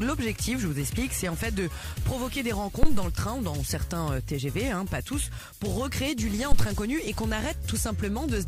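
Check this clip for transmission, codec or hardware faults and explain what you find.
Two phantom power thumps are present, at 2.83 to 3.12 s and at 6.52 to 6.69 s. Each comes from a supply being switched on a live input, so a sudden DC step passes through the coupling capacitors. It is heard as a deep, blunt thud peaking at about −8 dBFS and dying away over 64 ms and 39 ms respectively. On a waveform it appears as a large one-sided excursion with a smooth exponential return; a spectrogram shows a dark low-frequency blotch.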